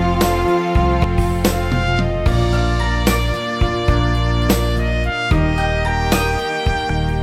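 Three short bursts of damaged data in a compressed stream break up the audio: brief blips at 1.04 s and 6.90 s, and a longer one from 4.50 to 4.53 s. Corrupted bytes make the decoder misread those frames and lose sync until it finds a valid header. On a spectrogram each shows as a narrow vertical disturbance; the waveform shows an abrupt discontinuity, widest at 4.5 s.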